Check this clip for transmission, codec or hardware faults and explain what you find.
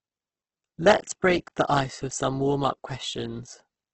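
One codec fault runs through the whole speech clip. Throughout, heavy damage that is likely Opus compression in its music mode leaves nothing above 8.2 kHz, which fits about 12 kbps. Starved bands are refilled with folded or noise content, so the sound is grainy and rough rather than swirling with holes, unlike MP3.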